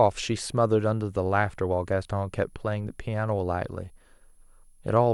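A switching supply whistle runs throughout the speech, a thin high tone wandering between about 10.57 and 10.76 kHz. A switching power supply nearby is cycling at a rate low enough to fall within hearing, or two supplies are beating against each other, and the pitch drifts as the load shifts. It sits roughly 40 dB below the speech, faint but steady above it.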